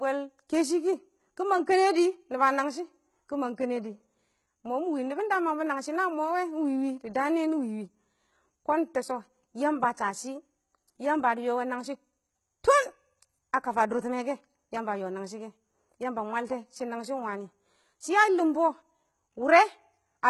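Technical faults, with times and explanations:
Throughout, HE-AAC compression: treble likely rebuilt from copied lower bands, so s sounds turn gritty and metallic rather than dull, with nothing above 11.8 kHz.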